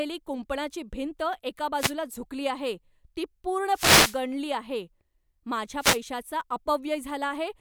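Wireless microphone noise hits occur at 1.77 to 1.93 s, 3.69 to 4.22 s and 5.79 to 6.00 s. The radio link fades as reflected paths cancel, so receiver noise swells into a swish of static over the speech, longest in the middle event.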